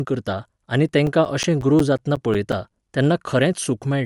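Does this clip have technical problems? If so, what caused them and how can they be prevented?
Yes. Throughout the speech there is a grainy, breathy edge with nothing above 11.5 kHz, likely from Bluetooth LC3 compression: the upper spectrum is partly replaced by filled noise, which fits a bitrate around 48 kbps and 10 ms frames. Unlike MP3 swirl, the damage is steady hiss-like grain. Sending the audio over a wired link or at a higher LC3 bitrate prevents it.

From 0.71 s to 3.06 s there are CD scratch ticks: 14 ticks at about six per second, the longest around 10 ms, where the player patches data it could not correct. Their regular once-per-rotation spacing separates them from random vinyl crackle. Cleaning or replacing the disc prevents them.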